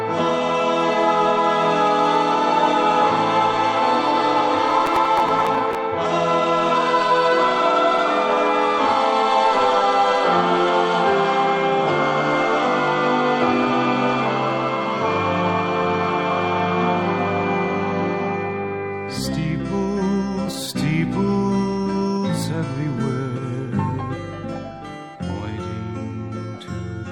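Processor overload crackle runs from 4.71 to 5.75 s. The processor fell behind and missed a run of deadlines for very short buffers, under a millisecond each. Each missed buffer was skipped outright, and a few dozen hard-edged gaps blur into a gritty tearing over the sound.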